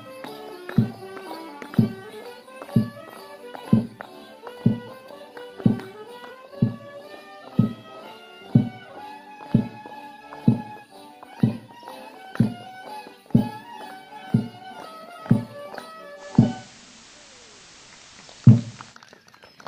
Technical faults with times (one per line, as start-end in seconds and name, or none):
16.15-18.98 digital radio blending to analogue